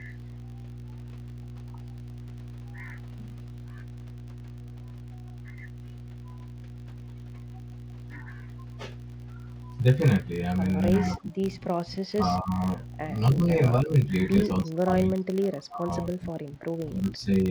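Right from the start there's mains hum, a steady 60 Hz tone with some low harmonics, sitting fairly high, roughly 10 dB under the speech. A ground loop or nearby transformer is leaking the power line into the signal, and it never lets up.

Running alongside it is a 50 Hz buzz that rises and falls with the speech level. That's a filter restarted on every block: it drops its state each block and starts from silence, so every block boundary lands a small tick.

From 11.12 to 11.43 s and again from 11.6 to 12.76 s, the speech sinks by something like 20 dB in patches. Smaller dips follow at 13.35 to 13.5 s and 13.82 to 14.07 s. Then from 14.61 to 17.23 s it drops hard, around 30 dB at worst, over roughly two seconds. That's likely speech suppressed in double talk, with the echo canceller ducking the talker while the far side was also speaking.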